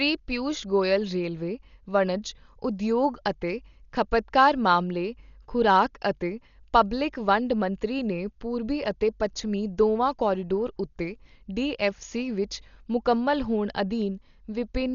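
Throughout the speech, the sound is dull and muffled, with nothing above 7 kHz and a rough, fluttering noise clinging to tones. This is likely Dolby Digital compression at a low rate, around 40 kbps, where the band is narrowed and starved frequency lines are filled with dither noise.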